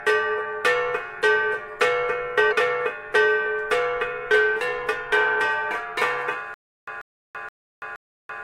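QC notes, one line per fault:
2.51 to 2.53 s and 5.11 s: damaged data in a compressed stream. Each is a brief digital blip. Corrupt bytes in the compressed frames throw the decoder out of sync. It misreads those frames, then hunts for the next valid header.
6.54 s to end: stutter with silent gaps. A 139 ms fragment of sound repeats four times. Each repeat is followed by about 334 ms of digital silence, giving an even 473 ms cycle. The likely cause is a stalled stream replaying its last buffer on each retry, then running empty.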